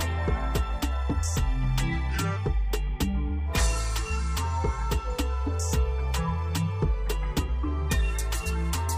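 No technical faults can be heard anywhere in this recording.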